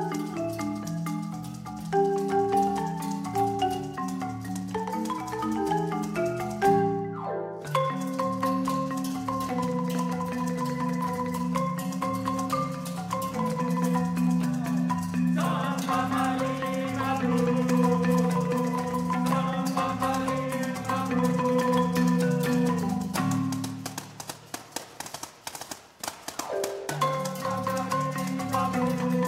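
Throughout, a resampler restarted on every block leaves an edge error every 10 ms, a 100 Hz buzz that, unlike mains hum, vanishes in silence; this fits 48 kHz to 44.1 kHz conversion.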